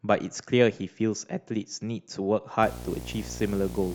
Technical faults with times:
2.62-3.94 video or display buzz

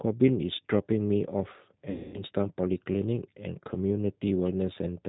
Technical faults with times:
0.00-5.09 G.729 codec
1.90-2.24 VoIP packet loss concealed by the speech codec

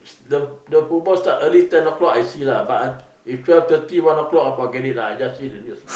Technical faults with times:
none

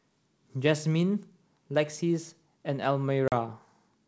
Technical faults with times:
3.28-3.33 packet loss on an ADPCM call

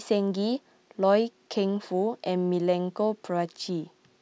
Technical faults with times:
none

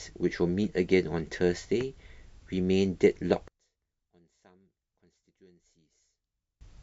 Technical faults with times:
3.48-6.61 one channel inverted

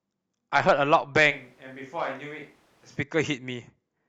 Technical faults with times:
1.32-2.96 switch to a distant microphone

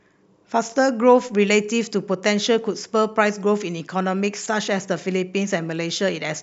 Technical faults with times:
none

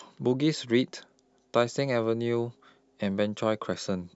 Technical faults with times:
none

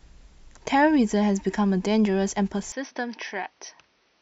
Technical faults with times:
2.72-4.22 input switched to a poorer device

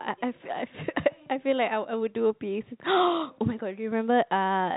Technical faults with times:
none

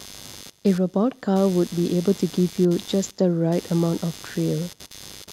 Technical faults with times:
0.00-5.33 computer activity noise

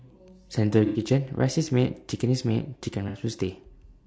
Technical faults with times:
0.00-4.07 low-delay AAC compression
0.85-1.00 AAC frame loss with concealment
3.08-3.17 AAC frame loss with concealment

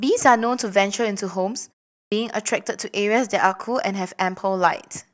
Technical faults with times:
2.06-2.12 clipped start after a pause

